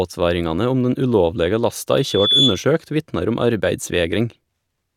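At 1.96 s a loudspeaker feedback squeal begins and lasts until 2.67 s. A microphone is hearing its own loudspeaker, and the loop gain tops one at 3.4 kHz. The tone swells over under half a second. It peaks about 5 dB above the speech.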